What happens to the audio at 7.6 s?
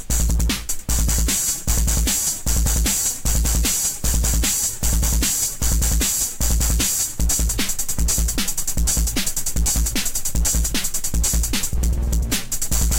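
Nothing goes wrong at 7.6 s: the sound carries straight through that moment with no dropout, click, glitch or other fault.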